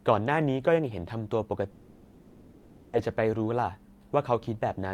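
From 1.71 to 2.95 s the speech breaks off and about 1.2 s never returns. The last sound is stretched into a buzzy, hissy fill that fades across the whole gap, with no stretch of true silence. This is likely a long network dropout, with the receiver concealing the missing audio until the stream resumed. Unlike a brief packet-loss glitch, the fill runs on for over a second and the speech resumes further on, skipping the lost part.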